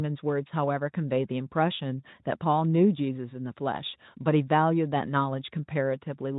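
Nothing here needs pointing out: the speech comes through the Speex encoding with nothing going wrong at any point.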